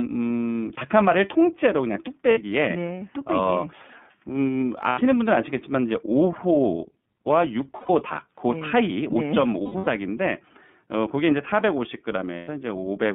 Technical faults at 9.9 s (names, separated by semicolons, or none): iLBC codec; lost iLBC frames